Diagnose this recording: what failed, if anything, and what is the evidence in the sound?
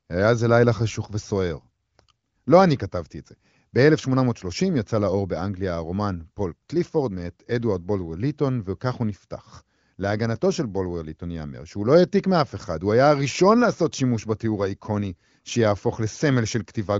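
Nothing failed; the speech shows no audible fault.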